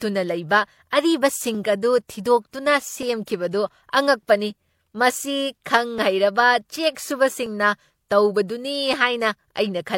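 The whole speech clip carries a layered, smeared coarseness. Nothing is heard above 16.3 kHz. The sound has two kinds of artefact at once, which points to transcoding between lossy codecs. It was likely coded first at a low rate, fitting HE-AAC near 32 kbit/s, then recoded as MP3 around 96 kbit/s. The second codec spends bits on the first one's damage and adds its own artefacts. Neither layer can be undone.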